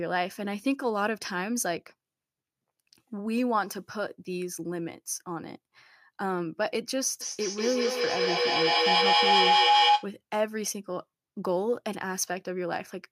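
At 7.21 s a feedback howl starts, as a microphone picks up a loudspeaker playing the same call and each trip round the loop comes back louder. The tone narrows to around 700 Hz, pulsing roughly five times a second, and peaks about 7 dB above the speech before stopping at 10.15 s. A spectrogram shows a bright horizontal line with regular throbs, and the waveform swells into a dense, growing envelope.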